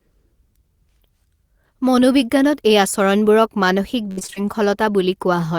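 Speech clip, and near the end, from about 4.11 s to 4.46 s, it breaks up with repeated packet loss, giving that choppy, robotic sound. Over that third of a second there are six separate holes, the longest around 57 ms. The receiver papers over them by stretching the last bit of audio. About 145 ms gets filled that way, and the concealed stretches make up roughly 55% of the span.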